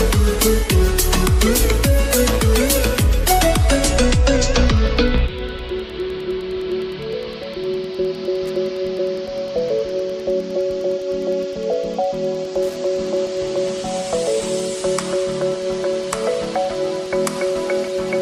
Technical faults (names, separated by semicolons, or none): Wi-Fi interference